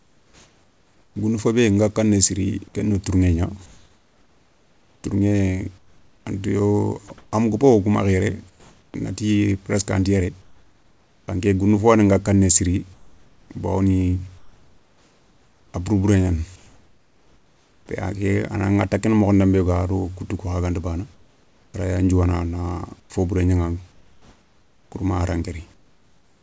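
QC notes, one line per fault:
0.00–1.16 s, 3.66–8.94 s, 10.42–11.28 s (between "anti yéré" and "nké goundou fo yaani"), 12.94–17.88 s, 21.14–26.42 s: comfort noise in place of the background. In the pauses, the real room tone gives way to a flat, featureless hiss, about 4–5 dB quieter where measurable, likely discontinuous transmission with the receiver synthesising noise.
7.08 s: sound dropped by the voice detector. A 20 ms sliver of sound vanishes into that same steady noise, likely because the sender's detector briefly took it for background and stopped sending until it triggered again.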